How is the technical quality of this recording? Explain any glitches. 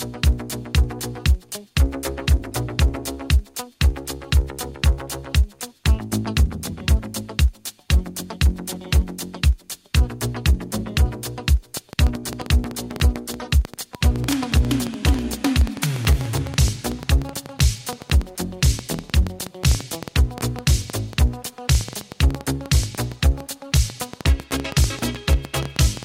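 Quality is spoiled by one fault. From 11.77 s to the end, a train of clicks injects around a hundred near-identical pulses, irregularly spaced at about 8.35 per second and peaking about 10 dB above the sound. It is likely caused by interference or a faulty connection. Unlike random crackle, the clicks share much the same shape and tick through pauses too.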